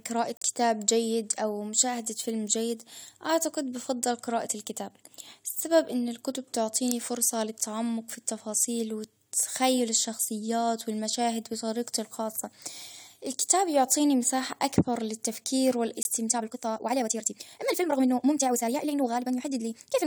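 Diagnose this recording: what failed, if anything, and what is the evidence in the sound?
Corrupt frames muted at the codec and decoder stage. At 0.37 s the speech drops into a clean hole of about 0.06 s that ends at 0.43 s, and at 16.03 s a shorter gap of about 0.04 s runs to 16.07 s. Both start abruptly. The first gap's length fits three consecutive compressed frames, and the second fits a single frame. The decoder rejected the damaged frames and the player filled their slots with silence. The surrounding speech stays in time, so timing was preserved.

From 16.27 s to the end of the clip, the speech suddenly runs at about 1.92 times its earlier pace while the pitch stays where it was. The delivery turns rushed, as if short pieces were cut out to squeeze the passage. This is most likely a time-stretched section added during editing or playback processing. Software shortened the audio to fit a length and dropped short segments to keep the pitch, which produces that hurried texture.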